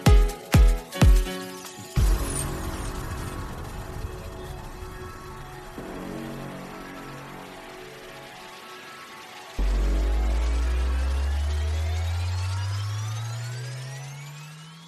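No technical faults can be heard in this audio.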